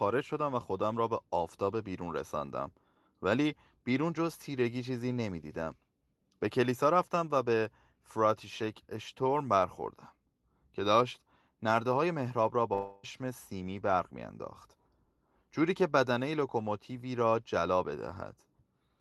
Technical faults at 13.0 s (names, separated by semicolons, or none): long network dropout